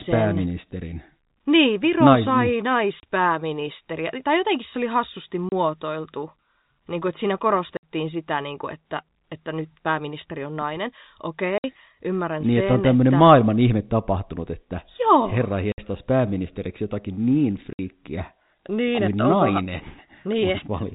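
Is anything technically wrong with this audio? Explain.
Yes. The speech has packet loss filled with silence. Hard-edged gaps appear at 3.00 s and 5.49 s (30 ms each) and at 7.77, 11.58, 15.72 and 17.73 s (60 ms each). The lengths, one or two units of 30 ms, suggest 30 ms packets dropped in transit, with the receiver playing nothing in their place. Concealment would instead smear or repeat the preceding sound, and the telephone-band G.711 coding is audible throughout.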